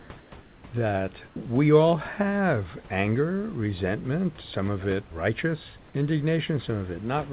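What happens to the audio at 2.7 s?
At 2.7 s the audio is intact, with nothing breaking up, dropping out or distorting there; the narrow band of the telephone-style codec and the faint room noise well below the speech are simply part of the clip.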